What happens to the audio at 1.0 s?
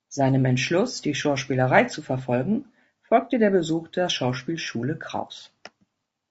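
Low-delay AAC compression runs through the whole clip, so at 1.0 s the speech is rough and grainy, with plainly audible codec damage. The likely cause is AAC-ELD, the low-delay coder used in video calls. At this low bitrate its coarse quantization lets noise fill the gaps between the pitch harmonics, and the top band sounds thinned or synthetic. The degree of damage points to a low rate, around 32 kbps.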